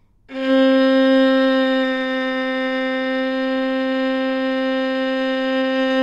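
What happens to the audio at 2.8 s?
Nothing goes wrong at 2.8 s; the audio plays through that moment intact, with no dropout, click, distortion or other fault.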